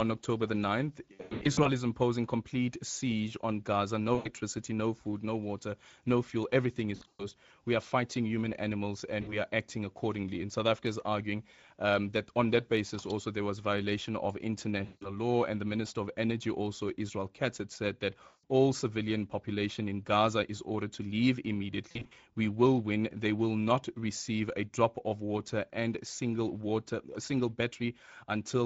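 Throughout the speech, Speex codec damage is plainly audible: a hoarse, noisy grain consistent with a Speex rate near 17 kbps, where the excitation is coded too thinly. On a spectrogram, harmonics look smeared, and any content above 4 kHz appears as diffuse, unstructured fill.

VoIP packet loss concealed by the speech codec strikes at 1.13–1.70 s (320 ms lost in bursts), 4.15–4.32 s, 6.95–7.24 s, 9.21–9.36 s, 14.85–15.17 s, 18.27–18.44 s and 21.91–22.13 s. The decoder stretches its last pitch and filter into a fading buzz or coloured noise, visible as flat, repeated spectral patterns with a sagging envelope.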